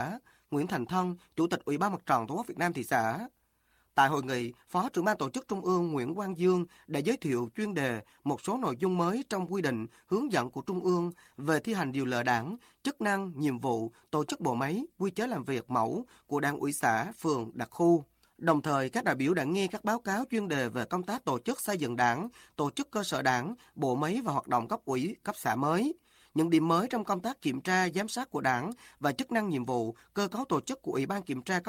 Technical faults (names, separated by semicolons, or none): none